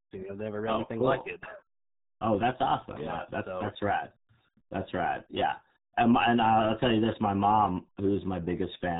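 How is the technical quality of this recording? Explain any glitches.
Poor: RealAudio 14.4 codec damage runs throughout. Nothing passes above 3.8 kHz, and the heavy coding leaves the speech muffled and gargly, which fits an 8 kbit/s modem-era codec. A clean telephone band-limit would sound thin but smooth, without this gargle.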